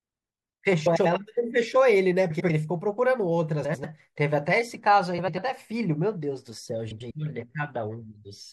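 Throughout the speech there is plainly audible MP3 compression, likely from encoding at a low rate around 64 kbps. The encoder has run short of bits, so the treble is cut off and weak frequency components flicker in and out between frames. The result is a watery, swirling quality, with metallic chirping on s sounds and consonant attacks that blur rather than start cleanly.

At 0.86–1.06 s, 2.30–2.50 s, 3.64–3.85 s, 5.18–5.38 s and 6.91–7.11 s the frames are out of order. In each case two adjacent blocks of about 96 ms were decoded in swapped sequence, so a stretch of roughly 0.2 s plays with its halves reversed. Each one sounds like a brief garbled flutter. The timing around each swap is unchanged.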